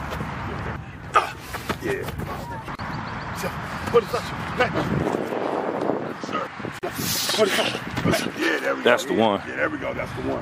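The audio drops out briefly at 2.75 to 2.79 s (about 36 ms) and 6.79 to 6.83 s (about 40 ms), four seconds apart: gaps at joins of encoded pieces, where separately encoded segments were concatenated without trimming the encoder's leading delay and final-frame padding.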